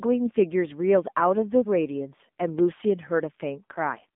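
From start to finish the speech carries the sound of the AMR narrowband mobile codec. The line is confined to roughly 200 Hz to 3.6 kHz, so there is no air or sibilant detail above that, and the low end is thinned. Coding damage is plainly audible: the voice has a buzzy, synthetic edge. That degree of roughness fits one of the lower AMR-NB modes, around 7.4 kbps, where each 20 ms frame is rebuilt from a vocal-tract model and a handful of excitation pulses.

From 2.16 to 2.20 s the speech briefly wobbles and dips. This is a lost AMR speech frame. The decoder had no valid data for that stretch, so it repeated the previous pitch and vocal-tract settings at reduced gain before the next good frame arrived. The short duration fits a single dropped 20 ms frame. The result is a momentary warble and loss of level rather than a gap, with the voice slightly rough for an instant as it resumes.

At 2.59 s a sharp snap sits on top of the speech. 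This is an electrical switching spike: a very short, broadband impulse unrelated to the voice, added to the signal rather than replacing it. It is most likely an arc from a nearby switch, relay or static discharge coupling into the audio path.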